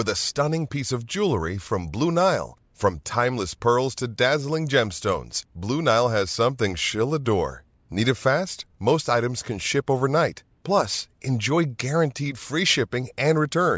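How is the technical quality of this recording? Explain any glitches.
I hear no technical faults anywhere in this recording.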